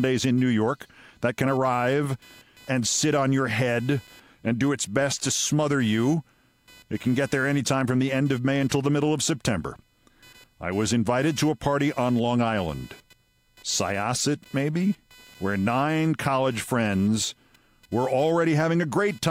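Throughout the speech, computer activity noise appears as a buzz pulsing at roughly 500 Hz, around 30 dB below the voice, as processing load disturbs the shared audio ground.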